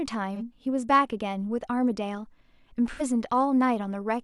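AAC frame loss with concealment at 0.35–0.42 s and 2.91–3.02 s: missing frames, about 43 and 85 ms (one and two frames' worth), are patched from the last good spectrum, leaving brief smeared, phasey speech.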